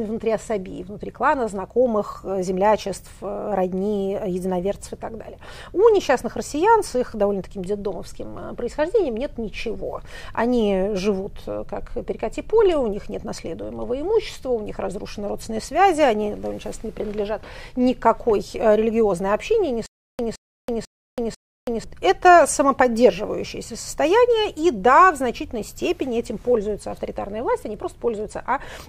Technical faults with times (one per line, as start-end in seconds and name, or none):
19.86-21.84 stutter with silent gaps